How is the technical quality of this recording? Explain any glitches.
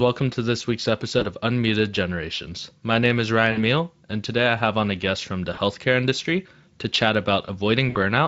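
The recording has four brief glitches, all from VoIP packet loss concealed by the speech codec, in speech carried over Speex at around 28 kbps with light codec colouring.

At 1.19 to 1.25 s, after "to this week's"; 3.51 to 3.64 s, between "name is" and "and today I have"; 5.53 to 5.59 s, between "a guest from the" and "industry to chat"; and 7.89 to 7.97 s, packets went missing. Gaps of roughly 20 to 60 ms fit one to three lost 20 ms frames. The decoder rebuilt the gaps from its last pitch and filter, turning the speech into a short buzzy or noisy, fading smear that stays weakened briefly after audio resumes.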